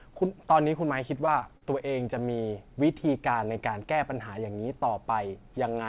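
Three short concealed packet losses land close together, at 1.26–1.29, 1.39–1.43 and 1.57–1.63 s, with roughly 20, 20 and 40 ms missing. The receiver extended the preceding sound to bridge each gap, giving brief smeared wobbles. On a spectrogram, already empty above 4 kHz from the call path, the patches show as repeated, slightly blurred streaks with soft edges.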